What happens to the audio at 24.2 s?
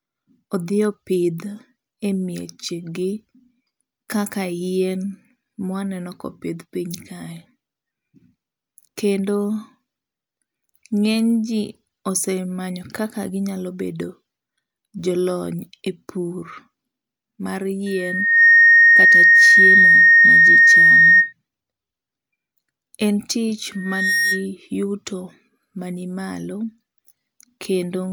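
A microphone picks up its own loudspeaker, causing loudspeaker feedback squeal from 23.73 to 24.46 s: a 1.8 kHz tone swelling quickly above the speech.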